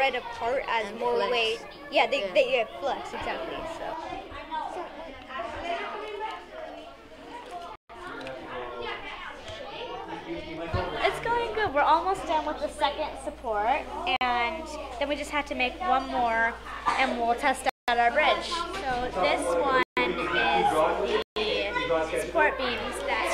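Blocks of digital silence point to audio buffers not being filled in time: 7.76–7.90 s, 14.16–14.21 s, 17.69–17.88 s, 19.83–19.97 s and 21.22–21.36 s. Each drops abruptly to silence and back. The 46 ms gap is a short hole, and the others are longer holes of 139–186 ms, lengths that fit multiples of a 2048-sample buffer.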